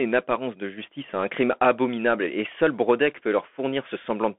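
A Bluetooth CVSD headset codec throughout squeezes the speech into a narrow telephone band with nothing above 3.7 kHz, leaving scratchy s sounds and granular hiss.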